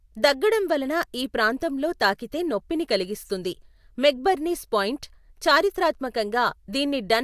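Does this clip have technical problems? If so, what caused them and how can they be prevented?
No, nothing technical goes wrong anywhere in this speech recording, so there's nothing to trace back or guard against here.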